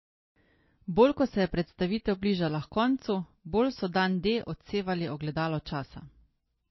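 From start to finish, the speech has no content above about 5.8 kHz. The top end is simply gone, so s sounds lose their edge. Compression damage is plainly audible across the whole clip. The likely cause is MP3 compression at a very low bitrate, roughly 26 kbps. With so few bits, the encoder cuts the treble at a fixed point and discards weak frequency detail. That leaves the sound thin and processed.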